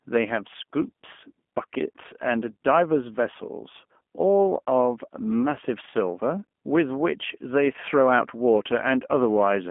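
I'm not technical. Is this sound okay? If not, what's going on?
No. The G.729 phone codec rebuilt this speech from a rough model, so from start to finish it sounds thin, muffled above 3.4 kHz, and slightly robotic.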